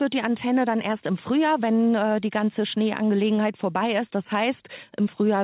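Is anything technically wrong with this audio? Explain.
No, nothing here is faulty: the speech carries the expected narrowband character of a call path, with nothing above 4 kHz, which fits G.711 mu-law telephony coding.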